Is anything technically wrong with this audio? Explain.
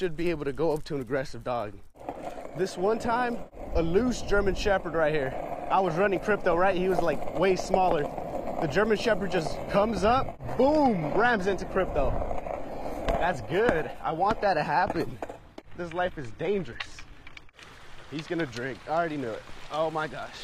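Yes. From 9.57 to 17.57 s, the adaptive stream switches to a lower bitrate. The connection slowed, so the player changed to a leaner version with no gap. The quality shift is sudden. The treble thins, with nothing above 14.9 kHz, and codec artefacts rise, consistent with a low-rate HE-AAC stream.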